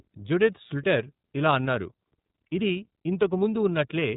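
iLBC codec damage runs through the whole speech clip. Each 30 ms frame is coded on its own, and nothing passes above about 3.8 kHz, so the speech sounds narrowband, slightly rough and synthetic, which fits iLBC's 13.33 kbps mode.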